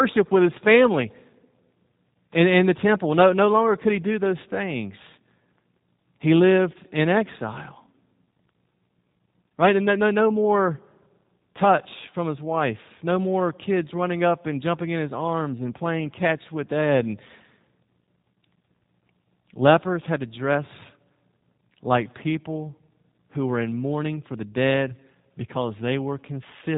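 The speech passed through a G.729 codec for its whole length, and the degradation fits an 8 kbit/s setting. This codec rebuilds each short frame from a vocal tract model and a few pulses, so the speech sounds plainly rough and synthetic, with nothing above 3.8 kHz.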